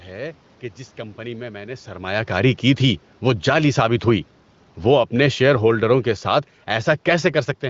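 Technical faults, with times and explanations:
3.22–3.75 s and 4.72–7.34 s, automatic gain falling: Right after "سرمایہ کاری کی تھی" the level sinks by about 5 dB over half a second, and later by about 6 dB over more than two and a half seconds. The gain control judged the input too loud and eased its gain down. The room noise drops along with the speech, so it is not a talker leaning away like the change near 1.5 s, where only the voice shifts.
3.66–4.26 s, automatic gain rising: Overlapping the end of the first drop, the gain control finds the input too quiet and climbs back by about 5 dB over roughly 0.6 s. Speech and background swell together, which sets it apart from a talker moving closer, where the voice alone gets louder. The quick fall and recovery give a brief dip-and-return pumping.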